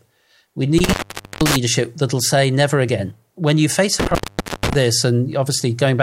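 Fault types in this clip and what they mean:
Intermittent contact: a loose connection in the signal path breaks twice, around 0.78 to 1.56 s and 4.00 to 4.75 s, and each time the speech drops out for about 0.48 s with crackle as the contact opens and closes. On a waveform the signal collapses to near-flat with spiky bursts at both edges. On a spectrogram there are bright vertical broadband streaks bracketing a dark gap that holds only a faint hiss floor.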